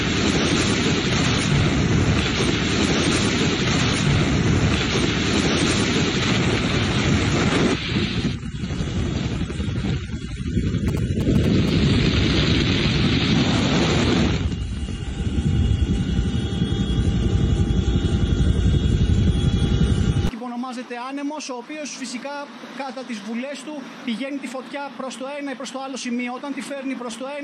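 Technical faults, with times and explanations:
10.88–11.70 s, GSM signalling bursts: a nearby 2G phone exchanging signalling with its network emits brief clusters of radio bursts, which the audio circuitry rectifies into a galloping run of ticks and short buzzes repeating at 216.7 Hz, roughly 10 dB below the wanted sound. On a spectrogram this shows as stacked vertical stripes with a harmonic comb spaced at about 217 Hz; the waveform carries sharp, square-edged pulse trains riding on the sound.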